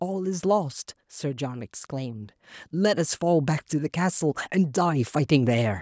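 From 0.41 s to 5.77 s, automatic gain rising lifts the level by about 8 dB as the control judges the input too quiet. Speech and background noise swell together steadily, unlike compressor pumping, which dips and recovers around each loud syllable.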